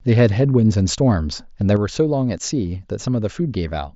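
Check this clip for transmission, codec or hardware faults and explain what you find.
One fault is present, a sudden gain jump. From 1.77 s to the end, the speech and its background noise drop together by about 5 dB in a single step, with no ramp. This is likely a digital gain setting applied instantly mid-stream. The audio is band-limited to about 7.7 kHz by the mSBC headset path.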